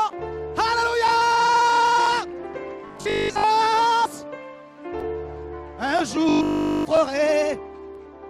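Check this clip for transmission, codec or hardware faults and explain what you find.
Two stretches of robotic sound from repeated short buffers, at 2.88 to 3.44 s and 6.29 to 6.85 s. Each turns into a rigid, metallic buzz at 50 Hz. The pitch is set by the repeat period, so it points to a 20 ms segment being looped. Fresh audio is likely arriving too seldom, and the gaps are filled by replaying the last fragment. In the first stretch most of the time is repeated material. In the second, essentially all of it is.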